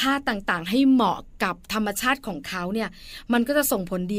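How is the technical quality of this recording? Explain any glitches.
No glitches are audible anywhere in this speech recording.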